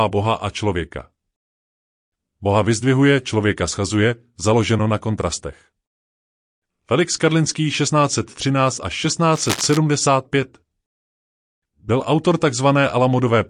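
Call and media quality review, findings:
Cable scratch noise, 9.35–9.78 s: dense uneven scratching bursts over speech, roughly 10 dB below signal. Likely a worn cable or connector being moved, contact resistance fluctuating rapidly.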